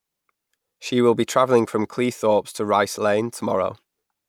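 No technical faults can be heard anywhere in the speech: the signal stays continuous and stable throughout, with no disturbances in level, timing or tone.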